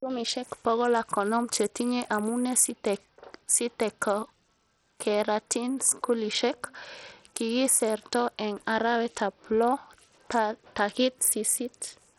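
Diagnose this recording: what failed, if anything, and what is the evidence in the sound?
The codec stage is at fault, and the sound points most likely to Bluetooth SBC compression, heavily degraded, across the whole speech clip. The top end flickers in and out rather than staying steady, and a gritty, grainy noise sits on the speech throughout. That fits a very small bit pool, in line with a low bitrate around 64 kbps. The weak upper sub-bands get little or nothing, while the remaining bands are coarsely quantised, leaving aliasing and grit.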